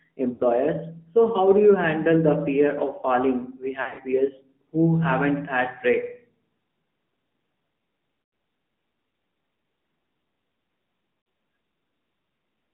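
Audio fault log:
throughout, AMR narrowband mobile codec: the speech sounds boxed in, buzzy and plainly synthetic, with nothing above about 3.6 kHz and little below 150 Hz. The codec rebuilds the voice from a vocal-tract filter and sparse pulses, which fits its 10.2 kbps mode.
0.34–0.43 s, 3.82–4.00 s (just after "the fear of falling"), 8.22–8.32 s, 11.20–11.26 s, lost AMR speech frames: the speech briefly smears, warbles and sags in level, then returns rough. Across 60 to 120 ms of missing audio, the decoder repeated the last good pitch and filter settings with falling gain. At 3.82 s the loss is spread over 160 ms in short runs.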